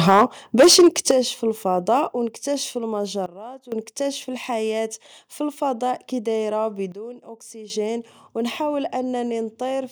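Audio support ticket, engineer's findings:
Microphone overload, 0.07–0.25 s and 0.59–1.11 s (ends just before "الفضاء أو نكتاشف"): harsh crackle on loud speech peaks, about 8 dB over full scale, roughly a tenth then a sixth of samples flattened. Likely mic input gain set too high. Waveform: squared-off tops; spectrogram: smeared broadband harmonics.

Microphone volume stepped down, 0.1 s and 1.11 s: voice and background drop together, about 2 dB then about 9 dB. Likely call software cutting device input after clipping. Waveform: abrupt envelope step, no ramp.

Sudden gain jump, 3.26–3.72 s (between "الفضاء أو نكتاشف" and "نكتاشف الحياة فالفضاء") and 6.92–7.7 s: speech plus noise floor abruptly quieter, about 14 dB and about 12 dB. Likely unramped digital gain change. Spectrogram: hard-edged darker band.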